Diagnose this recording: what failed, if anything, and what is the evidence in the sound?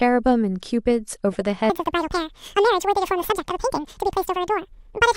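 DAB burbling appears at 1.33 to 1.35 s and again at 3.18 to 3.31 s. Weak reception let a small fraction of a percent of bits slip past error correction into the MP2 data, so short blips of noise land in individual sub-bands. On a spectrogram these show as isolated bright blocks in single frequency bands, frame by frame.

From 1.70 s to the end the speech runs as a section at the wrong speed, 1.89 times too fast, with pitch raised by nearly an octave, close to ten semitones. The likely cause is playback against the wrong clock. On a spectrogram the harmonics and formants jump upward at 1.70 s, and the waveform's syllables are compressed in time.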